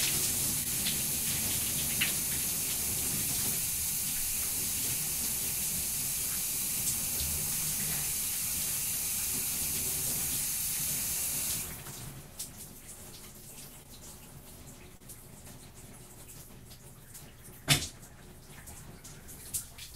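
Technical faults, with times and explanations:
0.63–0.67 s, 13.83–13.87 s and 14.97–15.02 s: short concealed packet loss. Small pieces of the stream arrived too late to decode, about 20 ms at the first two points and 40 ms at the third. The receiver covered each hole by extending the preceding sound, for 14 ms, 20 ms and 33 ms, then blended back into the real signal. Each gap sounds like a quick smear or wobble. The last is longest.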